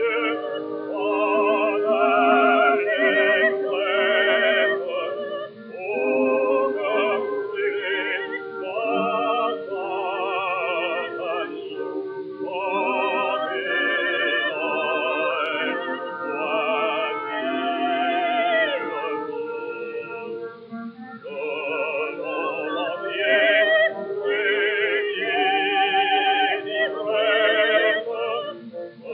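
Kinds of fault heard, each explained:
No technical faults can be heard anywhere in the recording; the signal stays steady and intact throughout.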